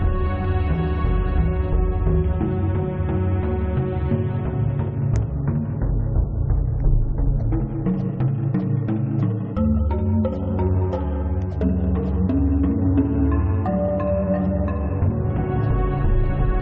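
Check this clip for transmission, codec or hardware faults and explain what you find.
Listening through the clip, nothing stood out as a transmission, codec or hardware problem.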